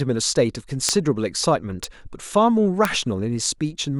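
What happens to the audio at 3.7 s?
Nothing goes wrong at 3.7 s; the speech carries on intact through that point, with no dropout, click or distortion.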